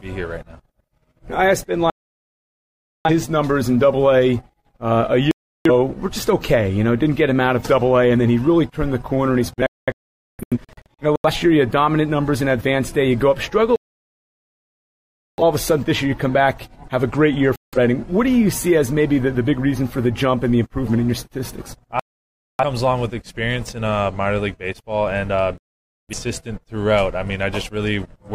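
The sound suffers repeated digital broadcast dropouts: it mutes at 1.90–3.11 s, 5.31–5.71 s, 9.54–11.30 s (several short holes, the longest about 0.47 s), 13.76–15.42 s, 17.56–17.78 s, 22.00–22.64 s and 25.58–26.14 s. The receiver silenced output while frames were corrupt or missing, so that material is gone. Unlike an analogue fade, the gaps are clean silence with no rising hiss.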